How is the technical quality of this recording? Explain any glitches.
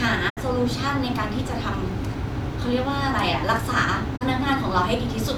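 The recording has two brief digital broadcast dropouts. From 0.28 to 0.39 s, and again from 4.16 to 4.23 s, the speech fades out over about 20 ms and goes silent. The receiver stopped getting valid frames and muted until clean ones resumed. The first hole is roughly 64 ms, consistent with two lost frames, and the second roughly 32 ms, consistent with one. Whatever was transmitted during those gaps is gone.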